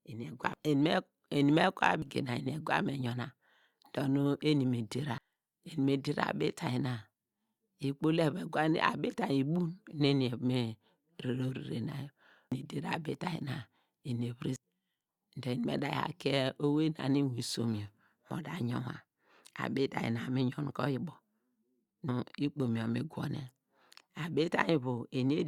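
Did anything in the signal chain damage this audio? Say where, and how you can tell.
Yes. The damage is at the codec stage: damaged data in a compressed stream. At 2.02 s, just before "gina eni egwa", and again at 5.18, 12.52, 14.56 and 22.08 s, the speech is broken by a brief chirp or squawk. Corrupted bytes at those points make the decoder misread or reject frames. It then loses sync and hunts for the next valid frame header, and that short stretch of garbled output is what you hear.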